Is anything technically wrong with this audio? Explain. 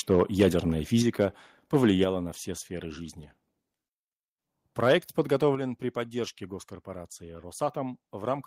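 Yes. The speech shows two related problems: microphone overload, and the microphone volume being stepped down in response.

Microphone overload occurs at 0.1–0.48 s, 1.21–1.24 s, and 1.75–2.04 s just before "на все сферы жизни". Peaks exceed full scale by about 8, 2 and 3 dB, flattening a few percent of samples. The likely cause is excessive input gain driving the converter into its limit, producing a harsh, crackly edge on loud syllables.

Microphone volume stepped down occurs at 1.02 s, 2.04 s (before "на все сферы жизни") and 5.55 s (before "при поддержке госкорпорации"), dropping level by about 4, 5 and 6 dB. Voice and background fall abruptly together, likely from call software reducing device input gain after detecting clipping.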